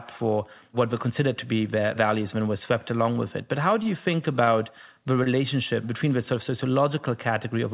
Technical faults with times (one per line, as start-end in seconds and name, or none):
3.83-3.87 short stall from a late packet
4.44-4.49 short stall from a late packet
5.24-5.39 short stall from a late packet